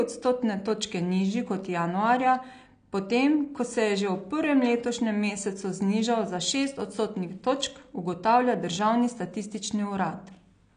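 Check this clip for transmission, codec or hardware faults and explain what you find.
One codec fault runs through the whole speech clip: AAC compression damage that is plainly audible. Nothing is present above 9.8 kHz, and the top of the band sounds dull and smeared. The likely cause is AAC-LC encoding at a low bitrate, consistent with about 32 kbps. With so few bits per frame, the encoder drops the upper spectrum and coarsely quantises what remains. This leaves a warbly, fizzy texture on sibilants and held sounds.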